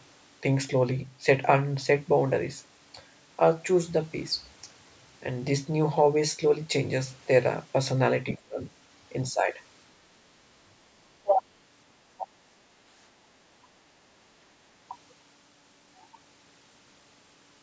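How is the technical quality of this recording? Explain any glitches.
The recording has two kinds of call-processing glitch, clustered between 8.3 and 11.4 s, in speech that reaches up to 8 kHz.

From 8.33 to 8.41 s the other side's voice leaks through faintly, about 25 dB below the speech. This is likely leftover loudspeaker echo that the canceller failed to remove. On a spectrogram it appears as a weak, separate harmonic trace beneath the main voice.

Speech is suppressed in double talk at 8.38 to 8.64 s, 9.3 to 9.59 s and 11.18 to 11.41 s. The voice dips by roughly 20, 10 and 25 dB, each for a fraction of a second, likely because the canceller turned down both talkers at once. The waveform shows abrupt notches in the envelope, and the spectrogram shows brief fades.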